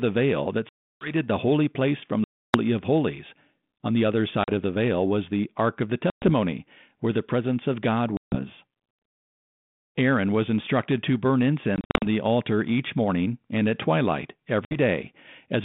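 Packet loss on an ADPCM call punches hard-edged silent holes at 0.69 s (after "veil that", about 320 ms), 2.24 s, 4.44 s (after "the other"), 6.1 s, 8.17 s, 11.76 s (short scattered gaps after "was instructed to burn") and 14.65 s. With those packets missing, the decoder's predictor and step size drift out of step with the sender's, so the speech comes back with a little distortion before settling.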